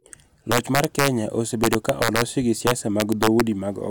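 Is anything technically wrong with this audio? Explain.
Yes. Integer overflow from 0.52 to 1.08 s, 1.64 to 2.22 s and 2.67 to 3.41 s: gain about 2 to 3 dB too high pushed peaks past the integer limit, wrapping them to the opposite sign instead of limiting. Loud speech peaks become violent cracks, harsher than clipping.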